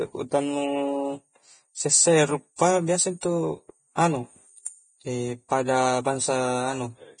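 The clip is speech with heavy Vorbis compression damage throughout, likely from low-bitrate encoding. Nothing survives above 9.7 kHz. The treble sounds hissy and grainy. Pre-echo occurs from 2.56 to 2.59 s and at 3.21 s. Codec noise spreads into the quiet moment before each attack.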